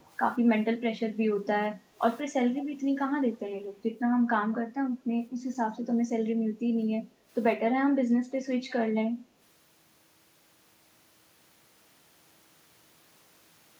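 A faint delayed copy of the speech trails by 173 ms for the first 0.08 s, far below the direct sound at about 35 dB down, and returns more clearly at 2.58 to 2.65 s, only about 20 dB down. This echo leak is likely a loudspeaker on the far end whose echo canceller let part of its microphone pickup through. At 1.72 to 1.98 s the room tone sags by about 9 dB, and at 7.1 to 7.26 s by about 6 dB, the dips lasting roughly 0.3 s and 0.15 s. This is background gated by the echo canceller, which pulled the microphone down while the loudspeaker was playing.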